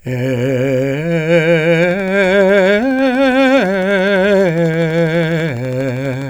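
From 1.83 s until 6.23 s, a steady ticking runs over the music, about 12.1 clicks per second at an even pace, roughly fifty in all, each as loud as the music itself and nearly identical in shape. This train of clicks is a repeated pulse added on top of the audio, most likely from interference by nearby equipment or a faulty connection or power supply.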